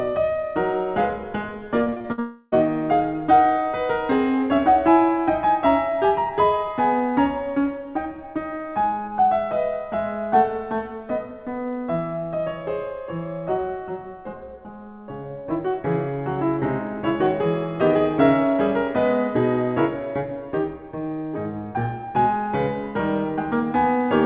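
A music clip whose band stops at 4 kHz, which fits a G.711 call path. From 1.84 to 2.20 s, repeated packet loss gives a choppy, robotic stutter: six short holes, the longest 56 ms, patched over almost half that span. From 2.20 to 2.54 s the sound smears into one unbroken, fading buzz without true silence, most likely a long network dropout rather than separate losses, before the music returns with that stretch missing.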